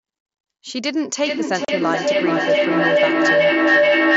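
From 1.24 s to the end of the speech, a feedback howl builds and takes over. Sound leaking from a loudspeaker back into a microphone on the same call gains level on each trip, narrowing to a tone near 500 Hz that pulses roughly every 0.4 s and peaks about 7 dB above the speech. Unlike a steady hum or electrical whistle, it grows and throbs.

From 1.65 to 1.69 s, during the howl, unconcealed Bluetooth headset packet loss cuts a 37.5 ms hole with hard edges into the audio, which fits about five lost headset packets replaced by silence. It is a sudden gap rather than the smeared or robotic fill that concealment would leave. The wideband mSBC link carries speech up to 8 kHz with light graininess.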